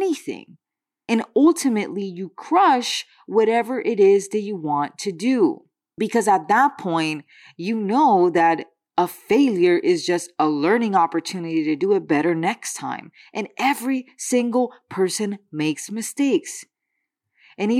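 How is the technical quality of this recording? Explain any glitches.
The recording has no technical glitches to explain. The speech runs without any interruption or disturbance introduced along the way.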